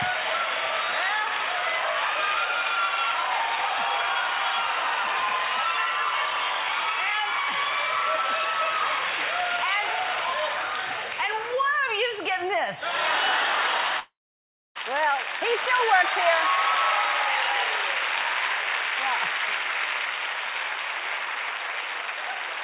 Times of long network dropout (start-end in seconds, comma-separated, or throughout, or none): 13.99-14.77